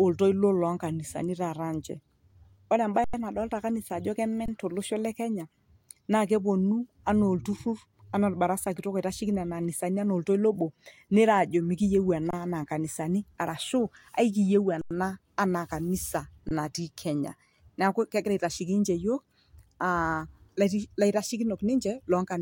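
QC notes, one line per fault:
3.04–3.14 s (just before "nadolita kanisa ajo"), 4.46–4.48 s (before "to losho le kenya"), 12.31–12.33 s, 14.81–14.91 s, 16.49–16.51 s (before "naati kenya"): underrun with held sample. The output buffer starved, so the converter froze on its last value. Each dropout lasts about 93 ms or 23 ms, which fits 4096- or 1024-sample buffers. Playback resumes where it stopped, so the sound cuts out with little or no click and returns with only a soft click. On the waveform each appears as a flat horizontal line. The spectrogram shows a clean vertical gap.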